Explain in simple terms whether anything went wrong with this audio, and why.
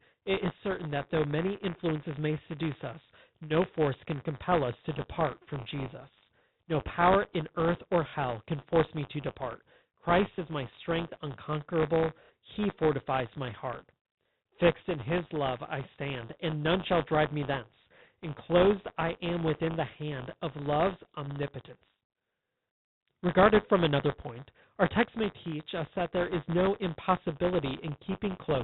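Yes, two things went wrong. Throughout the speech there is buffer tearing. The software filling the playback buffer and the hardware reading it have drifted out of step, so a small slice of each buffer, a few percent, plays audio from about 20 ms earlier. Those hard joins repeat 100 times a second, giving a steady robotic buzz that appears only while someone is talking.

Separately, there is packet loss with the last packet repeated at 8.1 s, 10.35 s and 12.24 s. Audio was missing for 30 ms, 30 ms and 60 ms, and the receiver replayed the previous chunk to fill each gap. The single repeats sound like small blips and the longer one like a brief stutter, which fits packets of about 30 ms, with two lost in a row at 12.24 s. The telephone-style sound of the line itself, limited to about 4 kHz, comes from the normal coding.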